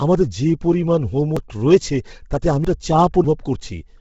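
From the start the speech carries heavy Bluetooth LC3 compression damage: the upper band sounds breathy and grainy, as noise-filled bands replace detail the codec could not afford to code. The coarseness points to a low LC3 setting, around 16 kbps with 10 ms frames, so the likely cause is an LE Audio link running near its minimum rate.

At 1.37 s, between "আমাদের যে পরিমাণ" and "রয়েছে তাতে আমি", a dropped buffer (overrun) skips about a tenth of a second. At 2.65 s, right after "রয়েছে তাতে আমি", a longer jump loses roughly a third of a second, and at 3.24 s another tenth-of-a-second skip follows. None of these gaps is silent; the speech leaps forward. This is the likely result of captured samples being overwritten before the software read them, leaving the two sides butted together.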